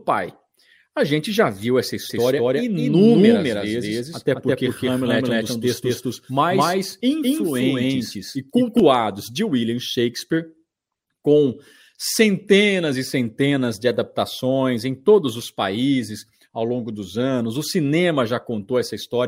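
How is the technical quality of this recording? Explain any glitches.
The recording has one clear glitch. From 2.10 s to 8.80 s a doubled audio track sits under the speech: a second, full-band copy trails roughly a fifth of a second behind at about the same level, likely from a slower second capture path. Unlike room echo, it has no decay or reverberant colour and switches on and off abruptly.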